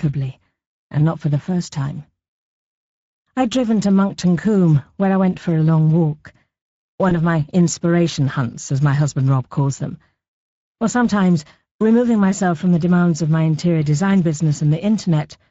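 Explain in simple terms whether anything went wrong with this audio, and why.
Yes, two things went wrong. All the way through, the speech sounds hoarse and grainy, with a thin, fizzy quality in the upper range instead of clean crispness. That is damage from the Speex codec, an older internet-call speech compressor. It rebuilds the voice from a compact description rather than storing it exactly, and at this quality setting there isn't enough detail to get it right, so the roughness is plainly audible.

Around 7.09 to 7.18 s, just before "of my inspiration hunts", the voice briefly sounds stretched and smeared, then takes a moment to recover. This is VoIP packet loss concealed by the speech codec. What sounds like one lost packet was patched over by the decoder, which guessed the missing bit by stretching the sound that came just before it. Because each piece of sound builds on the previous one, the distortion lingers briefly after the audio resumes.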